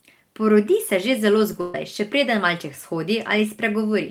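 Short concealed packet loss at 1.52 s, just after "se že zelo": about 10 ms of the call arrived too late for the decoder, and the receiver covered the hole by extending the preceding sound for a few milliseconds before rejoining the real signal. The patch registers as a brief smear in the flow of speech.

A burst of packet loss follows from 1.61 to 1.75 s, again after "se že zelo" and before "še preden malček". Here roughly 130 ms went missing in a row, and the receiver filled almost all of it by continuing the last sound and letting it decay, leaving no silent gap. The result is a held, fading stretch in place of real speech, after which the audio resumes with that portion simply gone.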